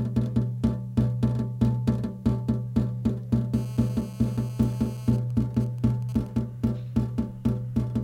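From 3.54 to 5.11 s, a hard, raspy buzz sits under the sound. This is GSM phone buzz. A nearby 2G phone in a call transmits in bursts about 217 times a second. The audio circuit rectifies them. The buzz is rich in harmonics, about 25 dB below the signal.

At 5.13 s it changes to GSM signalling bursts, lasting until 6.39 s. The caller has gone silent, so the phone sends only short groups of bursts. They come through as even ticks with a longer 217 Hz buzz twice a second, roughly as loud as before.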